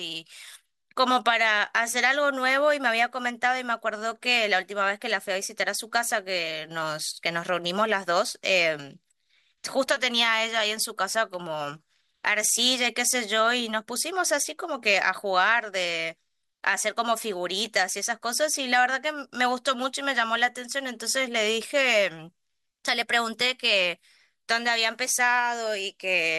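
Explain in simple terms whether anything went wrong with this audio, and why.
Listening through the whole recording, nothing went wrong that I could hear; the speech comes across steadily with no interruptions, glitches or odd sounds at any point.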